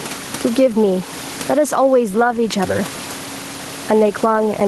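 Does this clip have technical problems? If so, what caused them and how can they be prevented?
Yes. Gain pumping runs through the whole clip, with the gain swinging by roughly 15 dB; the room noise sits about 28 dB below the speech. The likely cause is input gain set far too high, with a fast limiter or compressor clamping each peak. On a waveform, the peaks are flattened to a near-constant height; the call audio tops out at 12 kHz. Lowering the microphone gain, or turning off automatic gain control, prevents it.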